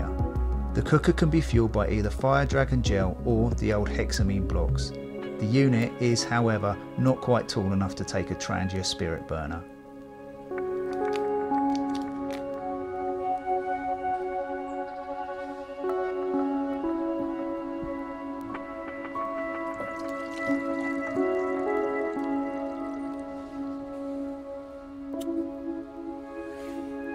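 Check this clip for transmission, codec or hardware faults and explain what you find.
One hardware fault runs almost the whole clip: word clock ticks, from 0.37 s to 26.8 s. Around seventy sharp ticks of uneven strength arrive at a steady pace of roughly one every 0.4 s. The receiving device runs on its own clock, about 50 parts per million apart from the sender's. Each time the two clocks slip past each other, one sample is dropped or repeated. A spectrogram shows evenly spaced thin vertical broadband lines. The waveform shows a one-sample step at each tick.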